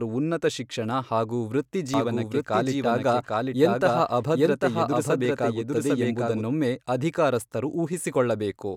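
Just after "ಉನ್ನತ ಶಿಕ್ಷಣ ಹಾಗೂ", at 1.94 s, a doubled audio track begins and runs to 6.44 s. A second full-band copy of the speech trails the first by roughly 0.7 s at about the same level, so every phrase is heard again over the next, with no reverb tail or room colour. It cuts in and out abruptly. The likely cause is a second, slower capture path or misaligned edit. On a spectrogram, identical harmonic patterns repeat 0.7 s apart, and the waveform thickens sharply where the copy starts and thins sharply where it stops.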